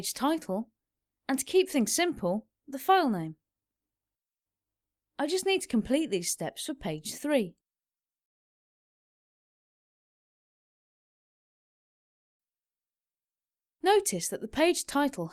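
Nothing stood out on listening to this clip.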